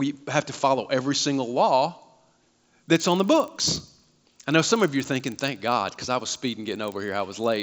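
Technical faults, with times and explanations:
2.6 to 7.62 s, resampler restarted on every block: each 40 ms block was converted separately, so its edges lacked true neighbouring samples. That leaves a small error every block, heard as a 25 Hz buzz under the speech that stops when the signal stops. This fits a 16 kHz to 48 kHz conversion.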